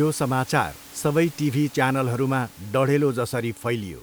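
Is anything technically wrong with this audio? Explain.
No, nothing here points to a technical problem; the faint room noise sitting about 23 dB below the speech is just part of the space the microphone was in, not something the system added.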